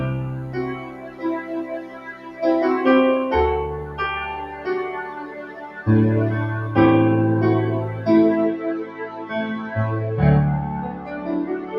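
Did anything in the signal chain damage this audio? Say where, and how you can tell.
Yes. A DECT cordless phone buzz entered the analogue wiring. From 0.0 to 8.46 s there is a thin 100 Hz buzz, about 30 dB below the signal. Nearby radio bursts were rectified.

A speech noise suppressor was applied to these sounds at the call-processing stage. Throughout, held sounds and tails sink, with swings of roughly 10 dB.

The same suppressor caused sound cut by the noise suppressor. It pulled steady passages down at 0.4, 0.74, 1.41, 4.45, 5.07, 8.84, 10.9 and 11.58 s, by up to about 10 dB.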